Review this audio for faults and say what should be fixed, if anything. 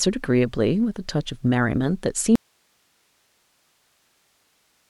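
At 2.36 s the speech drops out abruptly to a faint residue of hiss, roughly 45 dB down, lasting to the end. The likely cause is a lost source feed while the chain after it stayed live. The waveform collapses to a thin flat band, and the spectrogram shows only even broadband noise with no harmonics. Monitoring input connections and levels during capture would catch a lost feed in time to re-record.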